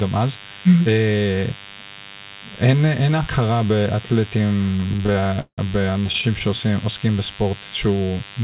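A DECT cordless phone buzz runs through the whole speech clip. A nearby handset or base sends a radio burst every 10 ms, and the audio circuit rectifies it. The result is a thin, steady 100 Hz buzz with many harmonics, sitting roughly 15 dB below the speech.

From 4.66 to 6.42 s come repeated stalls, a stutter. Packets arrived late, so the jitter buffer kept running dry. The receiver stretched the last sound to fill about two dozen gaps, the longest 172 ms, covering 500 ms in total. Nothing is lost, but the speech drags and stumbles.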